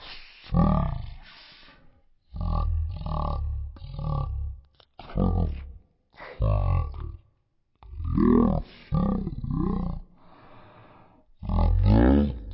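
Speech, played back with a wrong sample rate for its whole length: everything runs at one third of normal speed and sits about 19 semitones low. That combined drop in speed and pitch fits 48 kHz audio being read out at 16 kHz without conversion.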